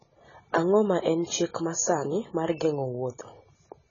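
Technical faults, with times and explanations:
Throughout, AAC compression: the speech is dull and smeared, with nothing above 7 kHz and heavy warbling, fizzy texture on sustained vowels and sibilants. A plain low-pass filter would not warble like this, so this is likely AAC-LC coding at a rate that fits roughly 16 kbps.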